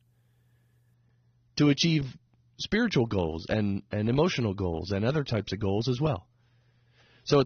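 At 0.94 s the adaptive stream switches to a lower bitrate and stays there to the end, with no gap. Treble above 6.3 kHz vanishes and codec artefacts thicken, fitting a fall from about 96 to 27 kbit/s. A spectrogram shows an abrupt flat ceiling there.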